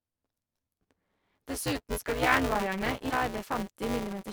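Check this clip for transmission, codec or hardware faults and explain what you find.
Two problems show up in this speech clip: one runs the whole way through, and one is a short glitch near the end.

Buffer tearing is present from start to finish. You get a steady robotic buzz at 188 Hz, which fits a 256-sample buffer, and it's only audible while there's signal. The writer and the hardware reader have drifted out of step and cross inside every period, so roughly a third of each buffer plays audio from about 10 ms earlier, with a hard splice on both sides.

Damaged data in the compressed stream hits at 3.07 to 3.13 s, right after "skal jernvaierne". It's a quick glitch. Some bytes in that part of the stream are bad, so the decoder can't read those frames, loses sync and has to hunt for the next valid frame header before normal playback resumes.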